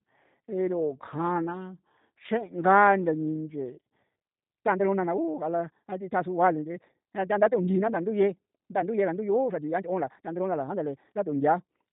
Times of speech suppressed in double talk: none

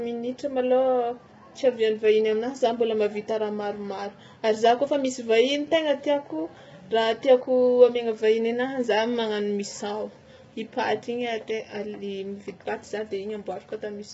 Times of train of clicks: none

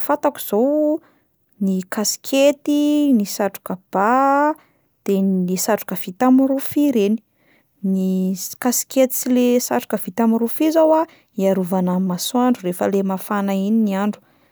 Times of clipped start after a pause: none

